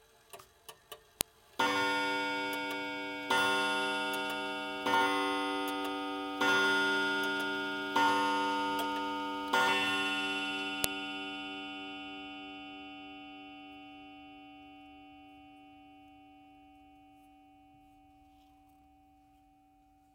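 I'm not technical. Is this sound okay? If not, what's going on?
No. At 1.21 s and 10.84 s there is a sharp snap from a file header played as audio: leftover file data at each join, clicking regardless of the surrounding sound.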